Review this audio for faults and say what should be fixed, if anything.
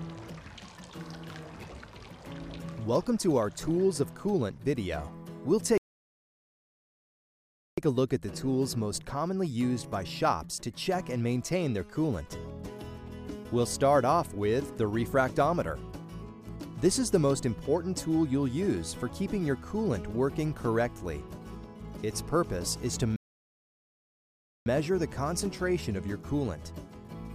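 Two playback stalls: the sound cuts out mid-flow from 5.78 to 7.78 s (2.0 s) and from 23.16 to 24.66 s (1.5 s), most likely because the player ran out of data or its thread was blocked. Prevent this with deeper buffering and a non-blocking playback thread.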